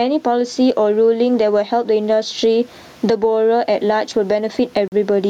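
Throughout, gain pumping: the input gain was likely set far too high, with a fast limiter clamping down on each loud syllable. The room noise sits about 43 dB under the speech, and the gain swings by some 15 dB, squashing the speech.

From 4.88 to 4.92 s, a Bluetooth stall: interference likely starved the headphone buffer. The speech cuts to silence for 42 ms, then resumes.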